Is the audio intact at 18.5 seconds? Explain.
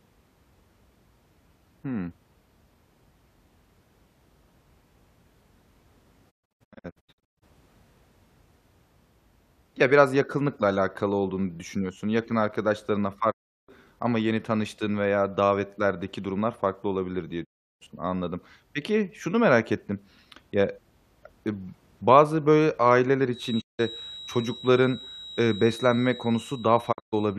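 Yes, at 18.5 seconds the speech runs on cleanly, with no dropout, click, distortion or other fault at that moment.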